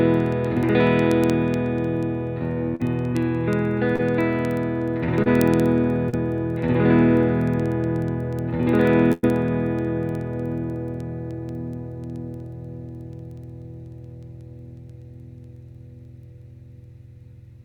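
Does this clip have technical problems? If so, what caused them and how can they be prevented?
Yes. Word clock ticks run from 0.14 s to the end, repeating roughly every 0.07 s. The receiving device's clock isn't locked to the digital source, drifting by a few hundred ppm, so one sample slips at each crossing. Prevent it by slaving the receiver to the incoming word clock.

Short concealed packet loss appears at 2.75, 3.96, 5.22 and 6.10 s as brief smears, each 20 to 40 ms of missing audio bridged by extrapolated sound before blending back. Prevent it with a larger jitter buffer and a more stable network path.

A burst of packet loss at 9.13 to 9.25 s removes about 100 ms. The gap is filled by continuing the last sound while fading it, and playback resumes later in the stream. Prevent it with forward error correction and a wired or less congested connection.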